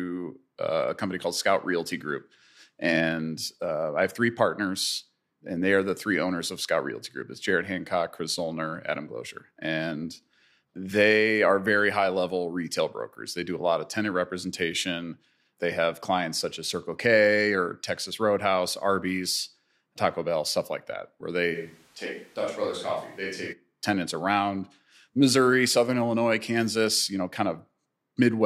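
From 21.56 s to 23.52 s, the speech turns abruptly roomy, hollow and thin. Its level falls by roughly 5 dB, and room noise sits about 30 dB below it. This is likely a switch to a distant microphone. The return is equally sudden.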